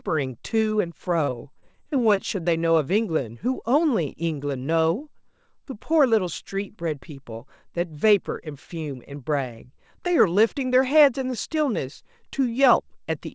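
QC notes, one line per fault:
1.24–2.19 s, repeated packet loss (robotic sound): packets went missing six times in under a second, with the longest hole about 37 ms and roughly 140 ms lost in total. Each hole was patched by stretching the preceding sound, so about 14% of this stretch is synthetic fill. That makes the speech choppy, with small pieces gone, heard over a band that stops at 8 kHz, which fits a G.722 call path.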